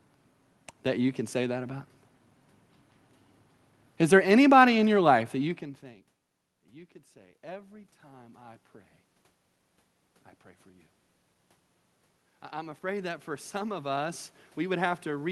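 From 6.48 to 8.74 s, voice and background swell together by about 7 dB. This is automatic gain rising: after the talker moved away around 5.5 s, the input fell about 24 dB and the gain control crept upward. It climbs again from 12.27 s to the end.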